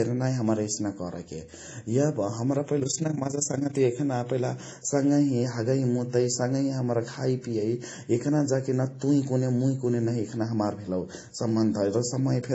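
Speech runs throughout, and its different artefacts heard together are the layered artefacts of transcoding between lossy codecs. The likely cause is a low-bitrate MP3 passed through WMA and then AAC-LC at about 32 kbit/s. A single encode would leave one consistent texture, not several stacked ones. From 2.80 to 3.80 s, overlap-add ripple makes the level pulse by about 11 dB around 30 times a second, a rough flutter. Its rate is locked to the frame rate and stays steady, unlike the irregular pumping of a compressor.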